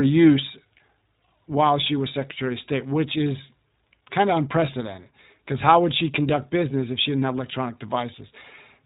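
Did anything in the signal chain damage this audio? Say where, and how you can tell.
Yes. Throughout the clip the speech is band-limited, with nothing above 4 kHz, and has a plainly audible rough, slightly synthetic grain. That points to the codec stage: the iLBC codec, a narrowband VoIP coder that encodes each frame's excitation independently. The damage is consistent with its 15.2 kbps mode and 20 ms frames. Coding every frame on its own, with so few bits, loses fine detail, which gives the texture its buzzy edge.

From 0.78 to 0.82 s there is a brief held, faintly buzzy vowel-like sound in place of fresh speech, and the voice recovers right after. That is lost iLBC frames, a network-stage fault. The gap fits a single dropped 20 ms frame, which the decoder concealed by repeating the last pitch cycle mixed with noise. Because iLBC frames don't depend on their predecessors, the next good frame decodes cleanly.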